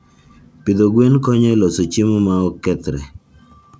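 Nothing here needs flagging; the speech just comes through a call connection, and the top end stops around 8 kHz, which fits a wideband call codec.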